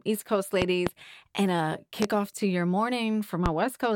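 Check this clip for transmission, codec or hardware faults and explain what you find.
A hardware-type fault is present: loud pops, three events. Between 0.62 and 0.91 s, just before "and a", two pops arrive in quick succession. A single pop follows at 2.02 to 2.06 s, between "and a" and "to your", and another at 3.46 to 3.50 s. Each peaks at about 20 dB above the speech, which continues underneath. The likely cause is a sudden voltage step or pulse from a plug, switch, static discharge or driver glitch.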